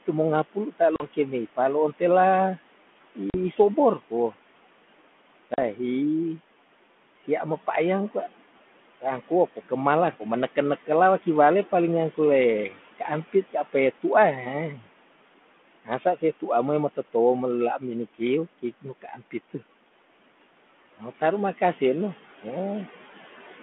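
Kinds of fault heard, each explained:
noise suppressor artifacts: The suppressor treats steady room background as noise and pulls it down by about 18 dB, frame by frame, across the whole clip. Between phrases the background sinks well below its natural level of about 18 dB under the speech. When speech returns, the gate opens and the background comes back up beneath it. The result is a noise floor that pumps in step with the talking.
speech cut by the noise suppressor: In three places the suppressor mistakes real speech for background and attenuates it. At 0.53 to 0.81 s the deepest drop is about 18 dB, and at 15.85 to 16.23 s it is about 11 dB. At 19.02 to 19.34 s, just after "melela minikiw kiknu", it is about 16 dB. Each cut turns down roughly 0.1 to 0.15 s of sound, leaving those moments swallowed and faint.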